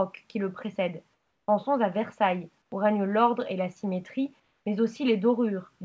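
Three times the quiet background gets swapped for comfort noise: 1.14 to 1.48 s, 2.62 to 2.72 s, and 4.40 to 4.66 s. In each gap the real room tone, already about 47 to 49 dB under the loud parts, turns into a flat, featureless hiss that sits about 5 dB lower in the first two and about 3 dB lower in the last. That's likely discontinuous transmission kicking in, with the receiver synthesising noise until sound resumes. Everything stops at 8 kHz, which fits a wideband call codec like G.722.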